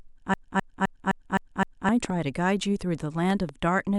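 From 0.34 to 1.89 s a broken-record loop repeats one 0.26 s fragment six times, identically and without decay, unlike an echo. A stalled stream likely kept resending it, and the intended speech is lost. At 2.05 to 2.12 s and 3.30 to 3.51 s come loud pops, each a double pop about 10 dB and then about 5 dB above the speech. They likely come from voltage transients, and unlike dropouts the speech continues underneath.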